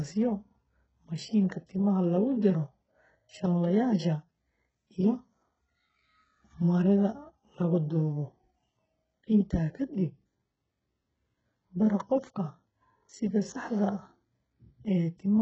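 Across the whole speech recording the treble sounds synthetic: s sounds come out gritty and lispy, with a metallic sheen over the upper register. The likely cause is heavy HE-AAC compression at a bitrate that points to around 8 kbps, where only the lower spectrum is truly coded and the top is rebuilt by copying lower bands upward. On a spectrogram the upper band looks smeared and blocky, its harmonics misaligned with those below, and stops dead at 8 kHz.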